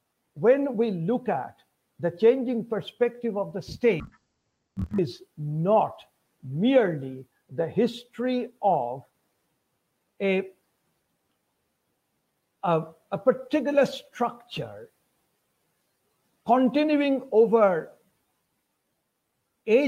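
From 4.0 to 5.0 s, the audio shows interleaved audio read as planar. Each 24 ms block of alternating left and right samples is split down the middle, with the first half taken as left and the second as right, so each channel plays its material at half speed while the overall pace holds. The result sounds an octave low, doubled and choppy at the 41.7 Hz block rate.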